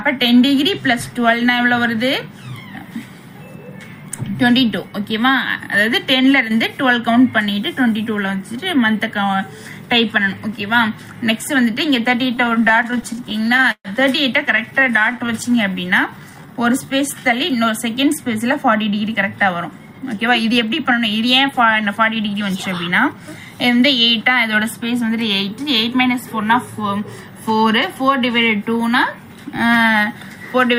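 Around 12.35 s the audio starts to stutter. These are repeated stalls, where packets were arriving late and the jitter buffer kept running dry. Through 13.88 s there are about twenty small holes, and the receiver bridges each one by stretching the last bit of sound. Roughly a third of a second gets filled that way, about 22% of the stretch, and nothing is actually lost. The longest hold, 131 ms, fades a little, and the whole section drags and hiccups. A lighter round follows from 14.57 to 15.31 s: about ten short holds, none longer than 17 ms, filling 100 ms in total.

Right after that, at 15.34 s, a jitter buffer slow-down kicks in and runs to 17.22 s. The buffer was low, so the receiver built up a reserve by repeating single pitch periods and bits of pauses over and over. That adds 190 ms, and playback runs at about 90% speed with the pitch unchanged. Sounds get drawn out and have a slightly sluggish, stretched feel.

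Then from 19.09 to 23.28 s it goes the other way with a jitter buffer speed-up. Too much audio had piled up in the buffer, so the receiver trimmed out short chunks of one or a few pitch periods, repeatedly, around 0.3 s in all. The audio plays at about 107% with the pitch unchanged, and it comes across as a bit hurried.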